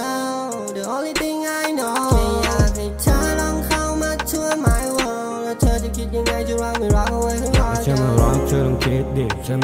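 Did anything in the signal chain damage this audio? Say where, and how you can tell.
No, nothing in the signal chain damaged this audio.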